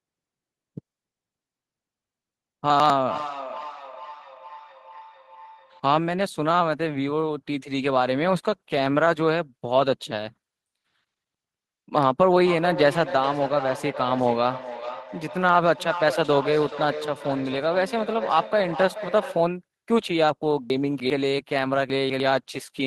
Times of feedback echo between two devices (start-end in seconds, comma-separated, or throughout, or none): 3.05-5.91, 12.46-19.59